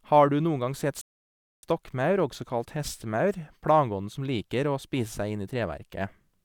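Speech with a rebuffering stall from 1.01 s to 1.63 s: playback ran dry, fell silent for about 0.62 s until more data arrived, then resumed exactly where it stopped. The waveform shows a flat gap, the spectrogram an empty band, with no missing material.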